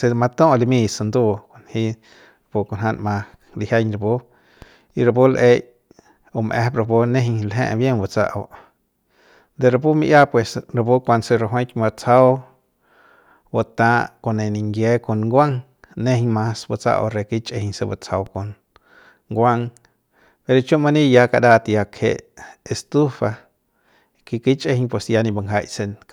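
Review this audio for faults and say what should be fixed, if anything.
Hard clipping, 12.13 to 12.22 s: a peak in the speech overdrives the signal path by about 1 dB, so its tops are sliced flat, and those squared edges add high harmonics heard as a short crackle. Prevent it by leaving more headroom before conversion.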